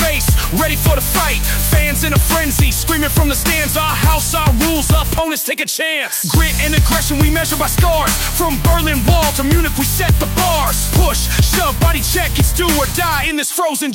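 No technical faults are audible anywhere in the audio.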